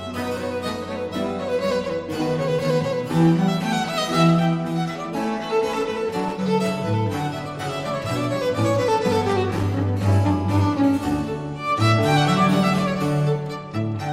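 A worn or dirty contact somewhere in the signal path is making and breaking as it shifts, which chops the signal and adds pops wherever DC sits on the line. The result is loose connector crackle: two short, irregular bursts of scratchy crackle over the audio, the first from 6.10 to 6.32 s and the second, longer, from 9.29 to 9.63 s, each lasting only a fraction of a second before the sound returns.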